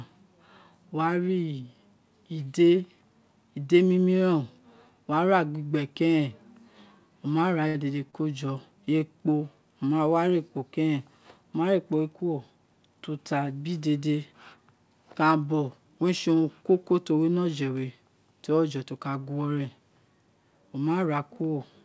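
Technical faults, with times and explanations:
7.68–7.76 s, 8.10–8.15 s, 8.85–9.01 s: short stall from a late packet. The jitter buffer emptied, so the prior sound was held 64, 26 and 20 ms, giving a slight buzz or dip, with nothing lost.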